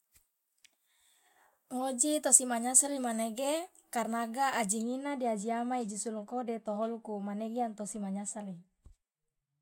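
Speech, with de-emphasis applied wrongly from 4.82 s to the end at 9.62 s: a treble-cut de-emphasis stage acted on audio lacking pre-emphasis, or ran twice, so the response slopes down smoothly to about 13 dB lower at 10 kHz than at 1 kHz, dulling and muffling the sound.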